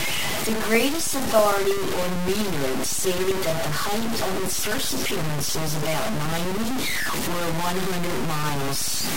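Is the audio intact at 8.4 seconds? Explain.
No. The speech at 8.4 s sits inside a run of periodic USB or driver dropouts lasting from 0.11 s to 9.07 s. Something stalls the audio path every 64 ms, and each time roughly 2 ms of signal is lost and replaced by silence, producing a steady ticking that rides on the speech.

The sound there is also coarse and grainy. That points to low bit depth without dither, likely a truncation to about 4 bits. With so few steps, the rounding error follows the speech and is roughly as loud as the speech itself.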